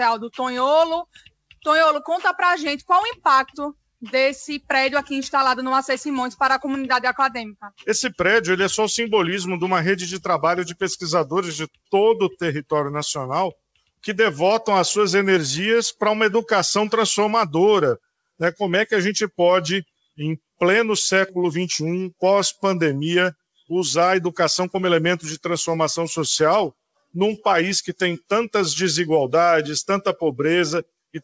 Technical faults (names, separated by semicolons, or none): sound cut by the noise suppressor